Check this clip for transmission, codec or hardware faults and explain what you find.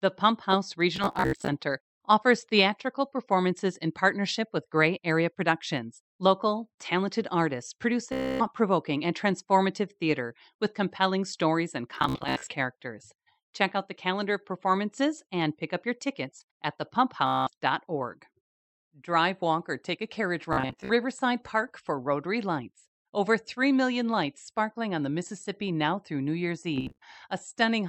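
The clip has one transmission fault, Bluetooth stutter, recurring six times. The wireless link dropped or delayed audio packets, and the receiver filled each gap by replaying its last short buffer. That turns the speech into a rapid machine-gun buzz until fresh data arrives and the speech resumes further along. It occurs at 0.96–1.50 s, just before "offers theatrical performances in"; at 8.13–8.46 s; at 11.95–12.52 s, after "with compelling stories and"; at 17.27–17.50 s, after "up your tickets at"; at 20.53–20.92 s; and at 26.76–26.98 s. Each burst swallows roughly 150 to 320 ms, and the longest unbroken repeat runs are about 60 to 75 ms.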